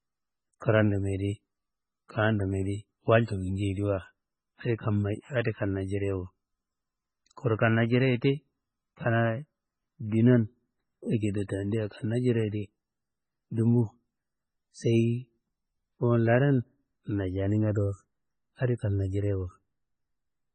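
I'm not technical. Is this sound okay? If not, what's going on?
No, the speech has a watery, swirly quality from start to finish, with s sounds turning chirpy and nothing above about 9.1 kHz, so it sounds dull. That's likely heavy MP3 compression, which squeezed the file by throwing away detail it judged unimportant.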